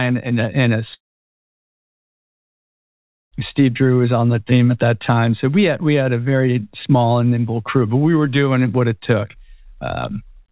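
Speech clip, band-limited with nothing above 4 kHz, consistent with a G.711 mu-law call path. Just after "and a and a", at 0.94 s, the audio breaks off until 3.38 s, most likely a long network dropout. The last sound is briefly stretched into a fading buzz or hiss before roughly 2.3 s of near silence, and speech resumes without the missing section of about 2.4 s. Nothing lost is recovered; the receiver simply skipped ahead once packets arrived again.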